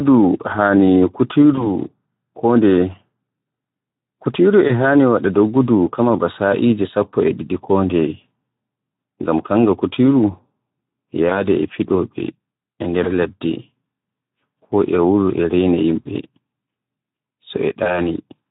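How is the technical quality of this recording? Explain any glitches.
The recording is speech with audible degradation throughout from low-bitrate coding, plus six brief glitches from lost network packets.

The Speex codec runs at about 11 kbps across the whole clip, and the damage is plainly audible. At this rate the CELP coder has too few bits to describe the excitation signal, so the voice sounds hoarse and grainy, with a noisy edge. The roughness is constant. Unlike the packet-loss glitches, it does not come and go.

VoIP packet loss concealed by the speech codec occurs at 1.55–1.68 s, 4.67–4.72 s, 11.29–11.47 s, 13.03–13.11 s, 16.04–16.07 s and 17.83–18.07 s. Each event sounds like a single missing 20 ms frame. The decoder fills the gap by extending the last pitch and filter at falling gain, so you hear a short buzzy or noisy smear rather than silence or a click. Because each frame builds on the previous one, the distortion persists after the gap. 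This is why some events last up to about 240 ms.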